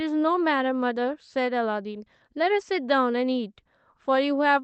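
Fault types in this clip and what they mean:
No faults can be heard in this speech clip. It has passed through a working WebRTC call path, and its coding keeps the sound within a band that stops at about 8 kHz, so the highest frequencies are missing.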